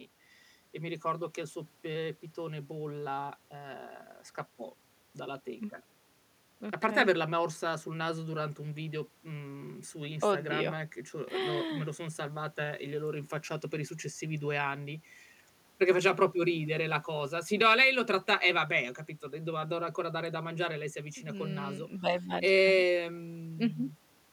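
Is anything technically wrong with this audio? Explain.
No, nothing technically wrong can be heard in this speech recording.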